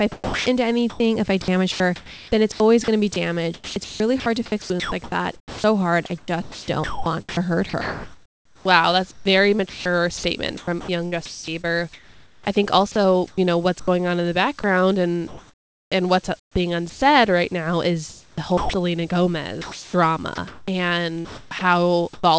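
Sound chopped by the voice detector runs from 0.12 to 17.0 s, 18.1 to 18.7 s and 19.6 to 22.2 s. Quiet stretches drop to synthetic comfort noise, likely from the sender's detector gating transmission. About 6.1 s, 0.44 s and 0.92 s are replaced. The sound sits in a band that ends at 8 kHz.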